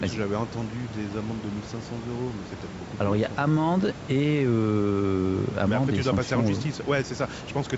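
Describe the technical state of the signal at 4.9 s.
At 4.9 s the signal is intact, with the call's normal microphone processing and the room noise sitting about 15 dB below the speech, and no fault present.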